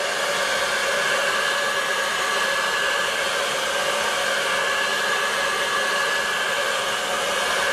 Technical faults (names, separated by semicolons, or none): none